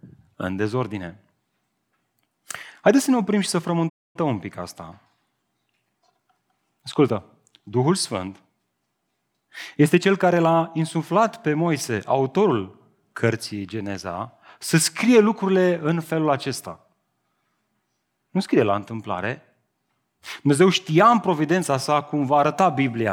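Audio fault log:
3.89–4.16 s, playback stall: the speech drops to silence mid-flow for 254 ms, then resumes where it left off. The player likely ran out of data or had its thread blocked, so output stayed silent until it recovered.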